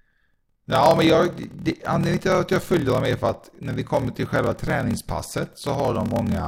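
From start to finish the speech carries a low, rough buzz at about 38.3 Hz and runs slower than natural, at roughly 0.889 times normal speed, while the timbre stays the same. This is a block size mismatch (padded). One stage hands over shorter blocks than the next stage expects, and the shortfall in each block is filled with silence. Those tiny gaps recur at the block rate, producing the buzz, and stretch the timing. The figures fit 1024-sample blocks being read as 1152-sample blocks.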